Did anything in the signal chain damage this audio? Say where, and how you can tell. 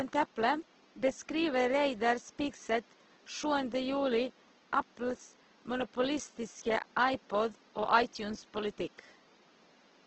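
Yes. The damage is at the codec stage, across the whole speech clip. Voiced tones turn grainy, rough and noisy, and the top end stops near 8 kHz. That points to Opus compression, likely its music mode at a low bitrate around 12 kbps, filling starved bands with noise.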